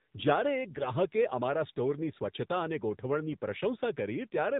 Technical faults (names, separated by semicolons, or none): AMR narrowband mobile codec; AMR bit errors